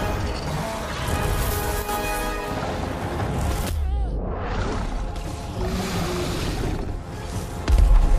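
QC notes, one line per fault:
1.82–1.89 s, one channel drops out: for about 70 ms the sound abruptly dips by about 6 dB and then returns at full level. This is likely one stereo channel briefly going silent, so the mono sum carries only half of the shared material.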